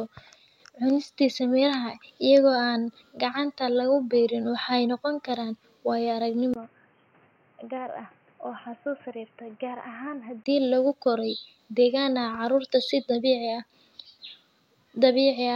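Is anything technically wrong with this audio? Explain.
Yes. An input switched to a poorer device from 6.54 to 10.46 s, starting just before "lagu koray deegaan". Recording likely moved to a narrower-band microphone. After a 20 ms gap the speech goes dull, with nothing above 3.1 kHz, about 10 dB quieter, over fresh background noise.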